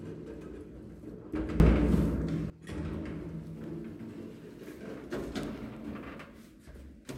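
A sudden gain jump runs from 1.6 s to 2.5 s, where the level of the whole sound steps up by about 18 dB from one instant to the next and then drops back just as abruptly. The background noise rises and falls with it, so the change sits on the entire signal rather than on any one source. The likely cause is a digital gain setting or bit shift applied with no ramp, snapping straight to the new value and back again.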